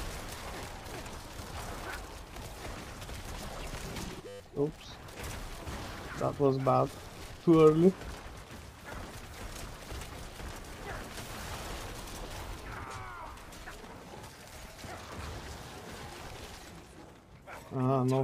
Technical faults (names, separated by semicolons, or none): system hang loop